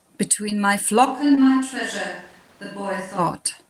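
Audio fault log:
0.49 to 0.53 s and 1.35 to 1.39 s, short concealed packet loss: brief smears where about 20 ms of speech failed to arrive and the decoder continued the preceding sound, then blended back.
1.07 to 3.17 s, switch to a distant microphone: speech abruptly turns roomy, hollow and thinner, about 5 dB quieter with more background noise, likely from the close microphone dropping out.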